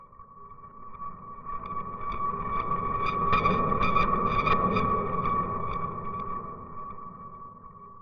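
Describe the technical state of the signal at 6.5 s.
At 6.5 s the signal is intact, with no dropout, clipping, distortion or other fault to be heard at that point.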